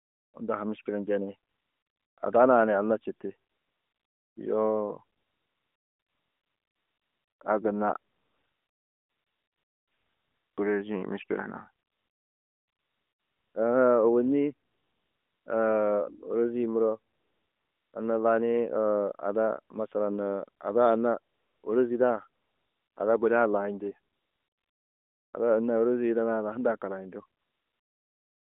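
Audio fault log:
0.0–28.59 s, AMR comfort noise: twelve pauses, from the opening 0.34 s to the final 1.2 s, with the longest runs at 5.18–7.40 s (ending just before "a gunna") and 8.12–10.58 s (just after it). In each pause the sender judged the talker silent and stopped transmitting speech frames. The receiver substituted a smooth synthetic hiss built from a rough level-and-spectrum sketch, so the real background drops out and a flat noise switches in, band-limited like the narrowband speech around it.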